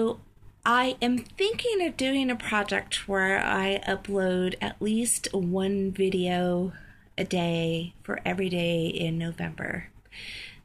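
No technical faults can be heard in this audio.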